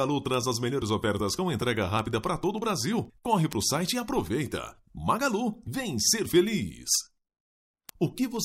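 The audio carries a steady stream of sharp ticks from 0.11 s to 8.37 s, recurring about every tenth of a second, some seventy in all. These are word clock ticks: the digital link was read by a device running on its own clock rather than locked to the sender's. The two clocks drift apart by something like 200 ppm, and each time they slip past each other a single sample is dropped or repeated, producing one tick.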